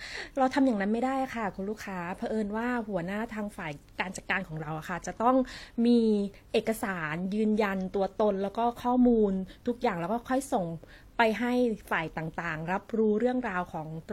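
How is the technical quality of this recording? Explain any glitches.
Quality is reduced throughout by transcoding between lossy codecs. For the whole clip the speech carries two overlapping sets of coding artefacts, and nothing is present above 16.2 kHz. The likely cause is a WMA encode, consistent with about 96 kbit/s, later re-encoded as HE-AAC, consistent with about 32 kbit/s. The second codec wastes bits reproducing the first codec's artefacts and adds its own artefacts, while the lowest band limit in the chain remains.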